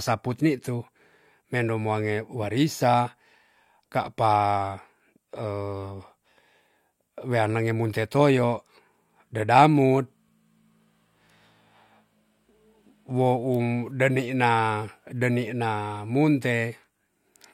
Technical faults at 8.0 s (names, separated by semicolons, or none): none